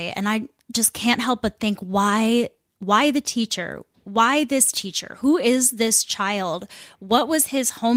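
No technical faults are audible.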